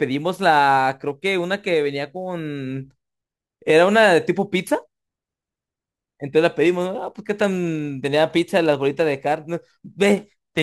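Sample clock jitter runs through the whole speech clip. The converter clock wanders by a few microseconds, so samples land slightly off time. Steep, loud and bright passages pick up a fine hiss, roughly 30 dB below the signal. Pauses stay clean.

From 6.61 s to the end, a block size mismatch (truncated) appears. One stage writes longer blocks than the next reads, and each block's tail is dropped. This gives a steady buzz at 91.9 Hz. Pace and pitch hold essentially unchanged.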